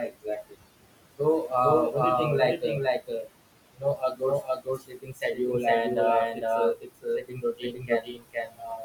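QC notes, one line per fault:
Throughout, doubled audio track: a dry full-band copy trails about half a second behind at roughly equal level, likely a second capture path; the spectrogram shows every onset repeated without decay.
Throughout, noise suppressor artifacts: room noise sitting about 15 dB under speech is pushed down about 21 dB between phrases and swells back under them; the background looks patchy and flickering on the spectrogram.
3.0–3.28 s, 3.77–4.22 s, 4.42–5.39 s (just before "and uh"), 6.34–6.43 s (just after "and uh"), 6.75–8.8 s, speech cut by the noise suppressor: speech mistaken for noise is attenuated by about 19–21 dB, though only about 9 dB at 6.34 s, so endings and soft consonants sound swallowed; these show as sudden envelope dips and missing high-frequency consonant energy.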